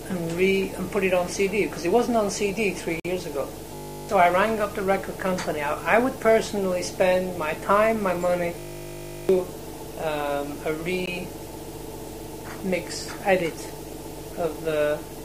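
At 3.00 s the sound drops out for about 50 ms, a clean hole with abrupt edges on both sides. This is a gap between stream segments: the timestamps of two consecutive segments don't quite meet, so the player fills the space with silence. Nothing is lost, but the pause is audible. The spacing of these holes fits segments roughly 4 seconds long.

From 3.75 to 4.09 s the sound turns into a steady, rough buzz at 50 Hz. This is a system hang loop. The computer or driver stalled while the audio hardware kept replaying one 20 ms stretch of its ring buffer, about 17 times over. Around a third of a second of real audio is replaced.

The same 50 Hz buzz returns from 8.59 to 9.29 s, again a 20 ms loop. This time it repeats about 35 times and takes the place of roughly 0.7 s of audio.

A second, shorter gap between stream segments falls at 11.06 s. It is a silent break of about 16 ms with hard edges.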